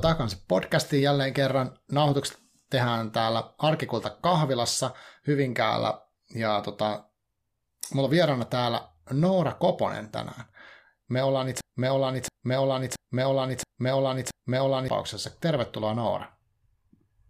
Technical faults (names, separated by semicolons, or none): broken-record loop